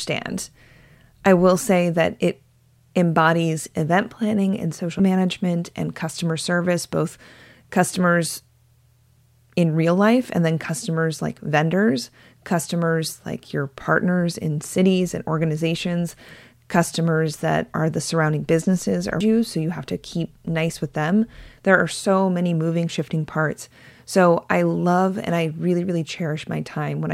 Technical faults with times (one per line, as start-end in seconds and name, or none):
4.99 damaged data in a compressed stream
19.20 damaged data in a compressed stream